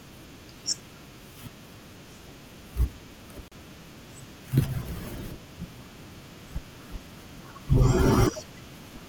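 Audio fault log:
3.48 to 3.52 s, gap at a join of encoded pieces: a silence of about 36 ms opens in the speech, where separately encoded segments meet with encoder delay and end padding left in. The speech resumes exactly where it stopped, with nothing skipped, unlike a dropout.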